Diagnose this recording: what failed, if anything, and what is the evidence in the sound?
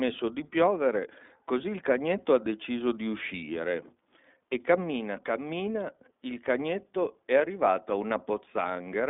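iLBC codec damage runs through the whole speech recording, so the failure sits at the codec stage of a narrowband VoIP path. The line is limited to roughly 200 Hz to 3.6 kHz, with nothing above 3.7 kHz, and the voice has a plainly audible rough, synthetic edge. Each short frame's excitation is coded on its own, without drawing on the previous one, which fits 20 ms frames at the 15.2 kbps mode.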